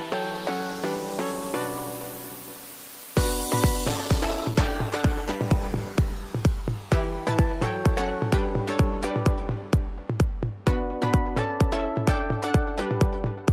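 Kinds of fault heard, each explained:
Call bitrate drop: the call's bandwidth estimate fell and the encoder was forced onto far fewer bits, which fits a fall from 40 to about 13 kbps. From 3.89 s to 7.55 s the sound turns coarse and muffled, worst for about 1.6 s, before recovering.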